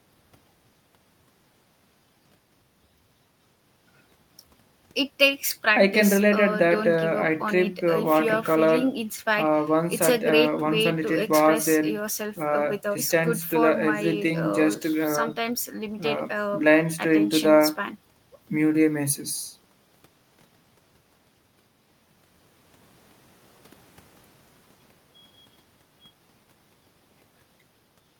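No technical faults can be heard anywhere in the recording.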